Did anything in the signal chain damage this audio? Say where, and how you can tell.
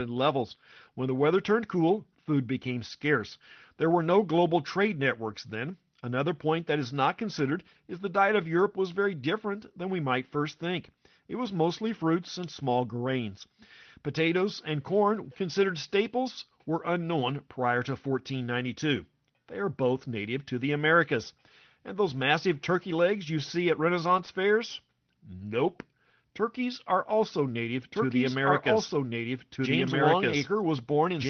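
Yes, in three places. Network stage first: lost packets rebuilt from error correction, 20 ms frames at 24.17, 24.27, 25.39 and 25.67 s. Opus played the low-bitrate copies carried in the following packets, so there's no gap, just a brief rough, noisier patch each time.

Also network: short concealed packet loss at 24.25 to 24.29 s and 25.37 to 25.41 s. In each case 20 ms never arrived in time, so the decoder extended the previous sound to fill it. You hear a quick smear or wobble before it blends back into the real audio.

From 27.91 s to the end there's a doubled audio track. A second copy at about the same level follows around a second and a half behind. It cuts in abruptly and has no decay or room colour, likely from a second, slower capture path or an edit holding two out-of-step copies. The 6 kHz Opus call bandwidth still applies underneath.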